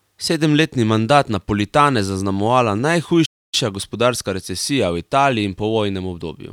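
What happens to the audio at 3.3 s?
A playback stall cuts the speech from 3.25 to 3.54 s. It goes silent for about 0.27 s, likely because the player ran short of data, then resumes.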